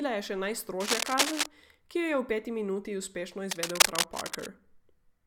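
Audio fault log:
0.80 to 1.47 s and 3.46 to 4.46 s, cable scratch noise: Dense, uneven bursts of scratching rustle over the speech, a few dB louder than it. The likely cause is a worn cable or connector being moved, its contact resistance jumping rapidly and adding bursts of noise to the signal.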